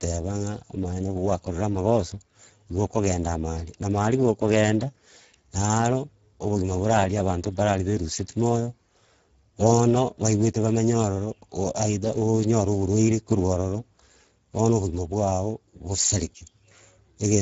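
Speech runs through the Speex codec from start to finish. The damage is plainly audible. Speex is a CELP coder. It models the voice as a filter driven by an excitation signal. At a low setting, few bits remain for that excitation. The sound fits a bitrate near 10 kbps. The voice comes out hoarse and grainy, with a noisy edge. Nothing is present above 7.6 kHz. The top band is only a shaped, noise-like fill.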